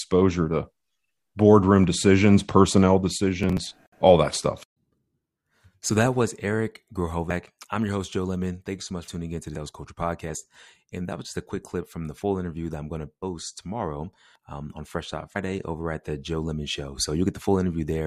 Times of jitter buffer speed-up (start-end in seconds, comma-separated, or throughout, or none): none